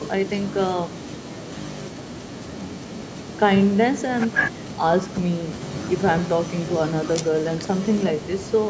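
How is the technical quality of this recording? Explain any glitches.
The technical quality of this recording shows no glitches to explain.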